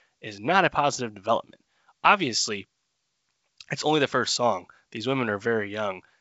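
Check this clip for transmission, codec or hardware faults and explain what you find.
There's one fault, a brief hit of bit errors on an ADPCM link at 1.36 s, over a G.722 wideband call that's carrying the speech at 64 kbit/s. The flipped bits knock the decoder's step size and predictor off, so you get a short pop with a rough little flutter in level as it settles, consistent with a low error rate touching a handful of frames.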